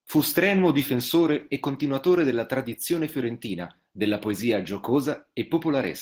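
Opus voice compression affects the entire speech clip, from start to finish, and its damage is plainly audible. The sound suggests a low bitrate of around 16 kbps in hybrid mode. There, a linear-prediction coder handles the band below 8 kHz and a transform layer covers the rest up to fullband. With so few bits per 20 ms frame, the excitation is coded coarsely, and that coarse quantisation is what degrades the voice.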